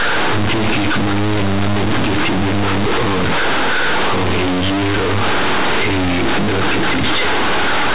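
From start to finish, the speech is wrecked by companded audio read as linear. The bytes were written as mu-law but played back as plain linear 8-bit samples, with no expansion step. Every sign change now throws the output across about half its range. Soft passages come out as loud as strong ones. The waveform is badly bent. The result is harsh, very loud, buzzy distortion, with heavy noise filling the pauses. The underlying mu-law telephone coding at 8 kHz is sound; the fault lies in how its bytes are read.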